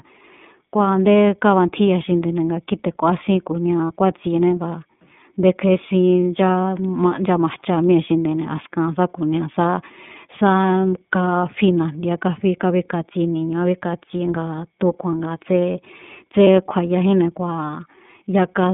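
From start to finish the speech sits on an iLBC codec, the narrowband VoIP coder. The line band runs only from about 150 Hz up to 3.6 kHz, so there's no air or sparkle on top, and the codec damage is plainly audible: a rough, slightly synthetic edge on the voice. That comes from iLBC rebuilding each frame's excitation on its own, and the grain of it points to 30 ms frames, which fits the 13.33 kbps mode.

Twice a single iLBC frame goes missing, at 3.87 s and again at 16.44 s, each a gap of about 30 ms. These lost iLBC frames get papered over by the decoder, which repeats the last pitch cycle blended with a bit of noise, so you hear a brief held, faintly buzzy smear of vowel instead of a dropout. Since iLBC frames don't depend on their neighbours, the voice snaps back straight after each one.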